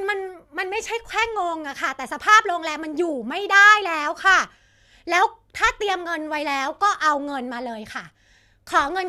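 No technical faults can be heard anywhere in the recording; the signal stays continuous and steady throughout.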